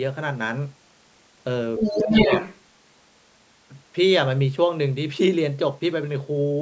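Other side's voice leaking through, from 1.77 to 2.6 s: a second voice comes through alongside the speech, somewhat louder than it. The likely cause is a loudspeaker echo that the echo canceller failed to remove from the microphone signal before sending it on.

Speech suppressed in double talk, from 1.89 to 2.31 s: while that leaked voice overlaps, the speech dips by as much as about 15 dB, in pieces adding up to roughly a third of a second. Likely the canceller couldn't separate talker from echo and turned both down.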